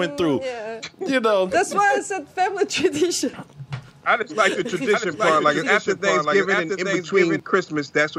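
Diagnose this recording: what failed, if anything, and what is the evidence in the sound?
A doubled audio track runs from 4.94 s to 7.40 s: a full-band copy of the sound trails the original by roughly 0.7 s, about 5 dB quieter, and appears and vanishes abruptly at those times. The likely cause is a second capture path or routing at the driver or buffer stage feeding the same signal in late. It differs from echo or reverb because there is one repeat only, with no decay tail and no room colouring.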